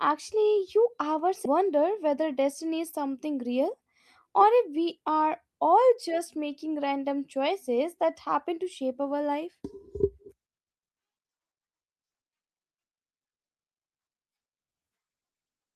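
Speech, with two timing faults. Just after "you ever", at 1.45 to 1.47 s, the sentence lurches forward with no gap. This is a skip ahead: around 0.4 s of audio was dropped, either lost in transit or discarded by an overflowing jitter buffer, and the two sides were butted together. From 3.45 to 4.43 s, between "destiny is something" and "if we are", the talking sounds hurried at unchanged pitch, running at 107% speed. This is a jitter buffer speed-up: the receiver trimmed many short pitch-period slices, roughly 70 ms in total, to work off excess buffered delay.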